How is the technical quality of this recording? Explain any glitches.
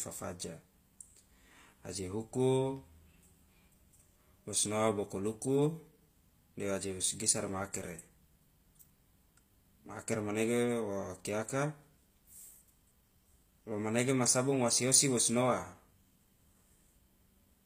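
Technical quality is limited by one fault present throughout the speech: HE-AAC compression, likely the cause of the audible coding damage. Nothing is reproduced above 15.5 kHz, and the treble sounds synthetic rather than recorded. That fits spectral band replication at a low bitrate around 24 kbps: only the lower spectrum is coded, and the upper bands are rebuilt from copies under a coarse envelope. The result is that s sounds come across gritty and metallic.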